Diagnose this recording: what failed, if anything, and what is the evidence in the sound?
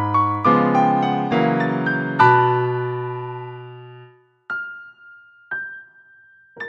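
A single sharp click sits at 0.35 s. It is a thin vertical line in the spectrum, with no gap and no lost sound. These are dropped samples: a couple are missing, so the waveform jumps ahead. The likely stage is a driver or buffer hiccup.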